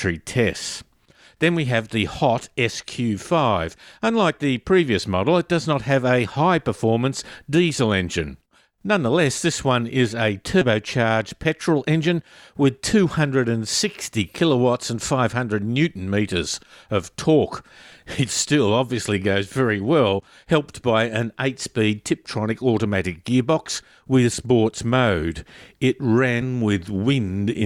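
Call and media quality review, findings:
Compressed frames skipped, 10.61–10.65 s, after "this one is a": audio jumps ahead around 70 ms, consistent with about three 20 ms frames missing from the file or rejected by the decoder as damaged. Same fault at 24.33 s, after "automatic gearbox with": around 100 ms lost, about five frames. Again at 26.41 s: around 20 ms gone, about one frame. Probable component: file or decoder; the skipped span is never played, leaving an audible glitch at each join.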